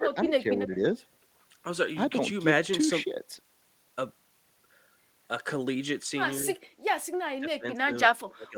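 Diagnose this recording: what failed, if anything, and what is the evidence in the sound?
The failure is in call processing. Speech suppressed in double talk appears four times. The speech level dips at 0.00–0.44 s, by about 15 dB at worst, and at 0.62–0.78 s, by only about 5 dB. Near the end the drops deepen, to about 25 dB at 7.38–7.92 s and about 30 dB from 8.25 s to the close. The events affect roughly 100 to 400 milliseconds each. The likely cause is an echo canceller that met overlapping talk and attenuated this side along with the echo.

An echo leak appears at 0.99–1.03 s, also in call processing. A faint, brief copy of the speech arrives 223 ms after the original. It sits roughly 35 dB below the direct speech, and it is a short scrap rather than a sustained echo. The likely mechanism is a loudspeaker on one side whose echo canceller left a small residue of its microphone pickup and sent it back down the line.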